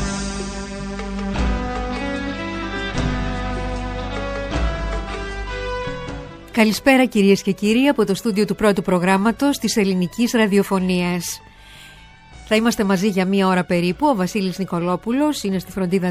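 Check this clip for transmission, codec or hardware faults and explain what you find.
No transmission, codec or hardware faults can be heard anywhere in the clip. Nothing in the signal path calls for explanation.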